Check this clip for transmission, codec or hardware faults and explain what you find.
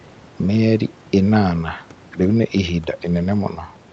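No transmission, codec or hardware faults are audible: the speech carries the normal character of a call microphone chain and a WebRTC path, with the lowest bass trimmed and nothing above 8 kHz, consistent with wideband Opus coding.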